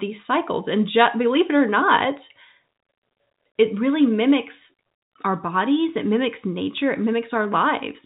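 No technical faults are audible.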